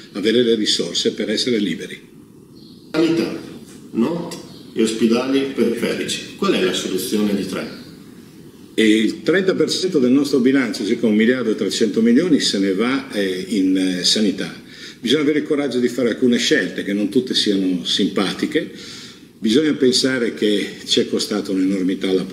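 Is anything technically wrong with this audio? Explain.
Yes. At 5.64 to 5.77 s and again at 9.74 to 9.85 s, the sound briefly turns smeared and noisy for roughly a tenth of a second. This is AAC frame loss with concealment. About 85 ms of coded audio went missing each time, which fits two lost frames. The decoder covered each gap by reusing the last good spectrum with altered phase and estimated energy, producing a blurred stand-in rather than the real audio.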